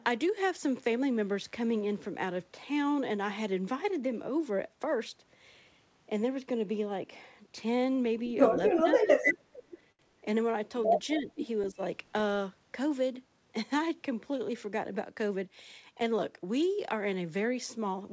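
From 0.5 to 2.0 s, switching spikes from a dimmer, rectifier or poorly shielded cable leak into the signal twice per 50 Hz mains cycle. That mains buzz carries a stack of 50 Hz harmonics reaching into the kilohertz range, so it sounds raspy and edgy rather than like a smooth hum. It sits roughly 35 dB below the speech.

From 8.57 to 9.41 s, the echo canceller most likely could not tell the near-end talker's speech from its own loudspeaker echo while both sides were talking, so it pulled the level down. This speech suppressed in double talk takes out about 700 ms of speech in total. At its deepest the drop is roughly 20 dB, so parts of the speech sink and thin out.

At 9.92 s the jitter buffer runs dry because a packet arrives late. The receiver holds the last sound for about 70 ms until the packet arrives, then continues from where it stopped. Nothing is lost, but the short stall from a late packet leaves a held sound with a slight buzz or dip and pushes everything after it 70 ms later.

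The suppression comes back twice more, briefly: 11.16 to 11.31 s with a dip of about 10 dB, and 11.71 to 11.80 s with a dip of about 15 dB. Each one dips the speech for a moment. Throughout the clip nothing sounds above 8 kHz, which fits a wideband call codec.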